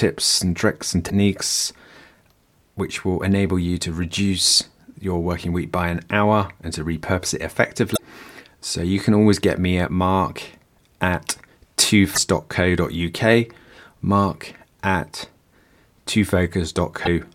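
Damaged data in a compressed stream hits at 1.06 s after "and tricks and", 7.93 s after "and to repurpose it", 12.11 s and 17.02 s. Corrupted bytes knock the decoder out of sync, so each becomes a 56 to 70 ms glitch while it hunts for the next frame header.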